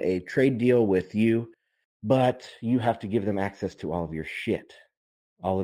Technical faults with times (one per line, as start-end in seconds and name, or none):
0.00-5.63 imaging from linear upsampling